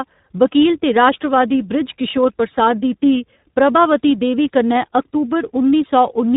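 From start to finish the speech carries tandem speech coding: it has been decoded and re-encoded across links with different codecs, so each stage works on the previous stage's damage. The sound suggests a delta-modulation stage, a G.711 link and finally an iLBC coder, two true speech codecs in a row. Nothing survives above 3.8 kHz, so it sounds muffled, with a rough, warbly texture that compounds beyond what either codec alone would cause.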